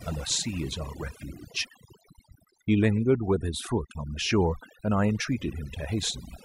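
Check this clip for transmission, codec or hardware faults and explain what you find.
One processing fault runs through the whole clip, rather than any transmission or hardware problem. Overdone noise removal throughout: a noise reducer set too strong gates bands near its noise estimate, leaving near-silent gaps with twinkling specks. On a spectrogram, the background shows scattered isolated dots and patchy holes.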